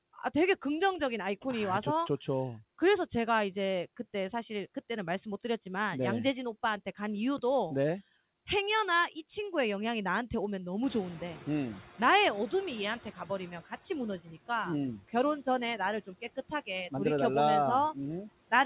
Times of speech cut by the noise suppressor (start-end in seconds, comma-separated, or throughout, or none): 16.06-16.68